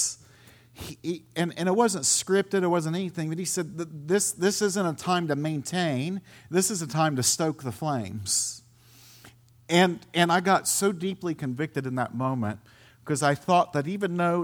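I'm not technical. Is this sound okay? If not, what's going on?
Yes, nothing stood out as a problem when listening to this recording.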